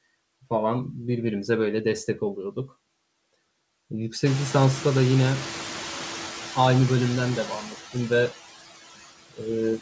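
Throughout the speech, a noise suppressor is working frame by frame, pulling down every band it judges to be steady noise by about 15 dB. These are noise suppressor artifacts: the background sinks in the gaps and swells back under each phrase. The band ends at 8 kHz, which fits a wideband call codec.

From 4.25 to 6.09 s, the noise suppressor is catching up. Around 4.5 s the room noise jumps by about 19 dB, but the suppressor's noise estimate was built on the quieter background and lags behind. For those 1.84 s it removes only about 4 dB, so the louder noise comes through nearly untouched. It then sinks as the estimate adapts, settling about 12 dB below the speech.

From 9.3 to 9.43 s, there is speech cut by the noise suppressor. The suppressor mistakes part of the speech for noise and turns it down with the background, by as much as about 19 dB at the deepest point. About a tenth of a second of sound is affected. 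That stretch sounds swallowed and faint.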